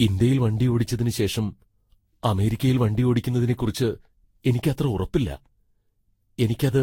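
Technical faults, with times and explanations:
Throughout, generation loss: the speech sounds swirly, hollow and smeared, with blurred attacks and nothing above 16.6 kHz. That is worse than one Vorbis pass near 60 kbit/s would explain, likely from around seven re-encodes whose shifted frame grids compound noise and spectral holes.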